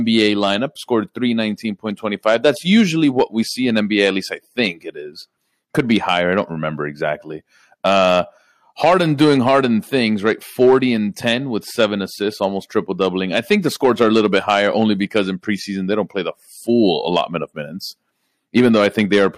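From start to finish the speech carries hard clipping. The signal was driven roughly 4 dB past the ceiling of a stage in the chain, so the highest peaks were sliced flat instead of passing intact. Only a small fraction of samples, under one percent, actually hit that limit, so the damage sits on the loudest moments: brief crackle and a gritty edge on strong syllables, caused by harmonics the squared-off peaks push high into the spectrum.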